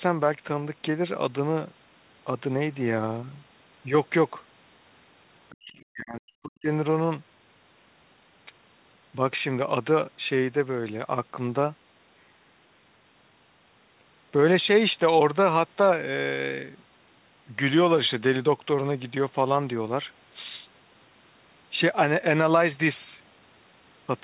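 A speech recording in which, between 5.51 and 6.68 s, the talker's level collapses in pieces, sinking by roughly 40 dB at its deepest, with about a second of sound affected in total. This is likely speech suppressed in double talk: the echo canceller, faced with both sides talking at once, could not tell this talker from loudspeaker echo and attenuated everything. On a waveform the envelope pinches to near-flat gaps, and on a spectrogram the harmonic bands fade or break into patches. Throughout the clip, energy stops sharply at 4 kHz, which fits a narrowband call codec such as G.711 mu-law at 64 kbps.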